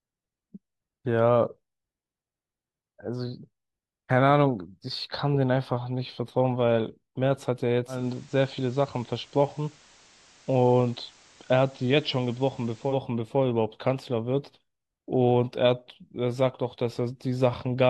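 From 7.87 s to 13.0 s the speech drops about 1 dB and gains a hiss roughly 30 dB down. This is digital radio blending to analogue: the receiver cross-faded over 182 ms to the station's FM broadcast, then back.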